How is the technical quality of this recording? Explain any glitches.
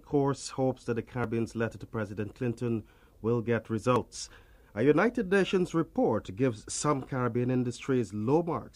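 The recording has three short discontinuities, at 1.24 s, 3.96 s and 5.96 s. Each is a jump where the sound skips ahead with no gap, as if around 40 ms had been cut out and the two ends butted together. This is likely a dropped buffer (overrun): the capture software fell behind, the hardware overwrote a block of samples before it was read, and that slice was lost. The waveform is spliced directly, so each event is a small skip in the sound.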